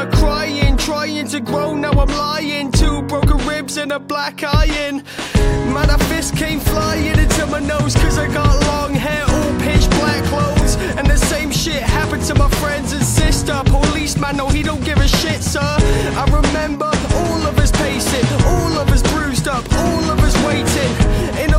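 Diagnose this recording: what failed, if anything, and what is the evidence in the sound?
Sharp, isolated ticks at 3.90, 10.62 and 20.18 s, peaking at about -9 dBFS: bit error spikes, where a single flipped bit in storage or on a digital link briefly corrupted one to three samples.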